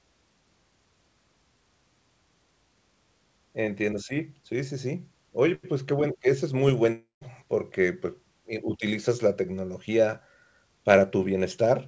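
From 6.92 to 7.23 s the audio breaks up in a way that points to a long network dropout as the likely cause. About 300 ms of the original sound is lost. The receiver fills the gap by stretching the last sound into a buzzy tone that fades, and roughly 150 ms of near-silence follows before the audio resumes further on. On a waveform, the envelope tapers into a flat trace. On a spectrogram, smeared harmonic bands fade into an empty gap. Throughout the clip, energy stops sharply at 8 kHz, which fits a wideband call codec such as G.722.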